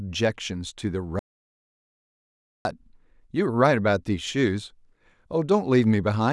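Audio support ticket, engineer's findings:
Audio dropout to silence, 1.19–2.65 s. Speech cuts off abruptly mid-flow, then about 1.46 s of dead silence with no room tone, then cuts back in. Content in the gap is unrecoverable. Likely cause: input lost upstream (device disconnect, failed link or stray mute) while the recorder kept writing silence. Check input connection and mute path.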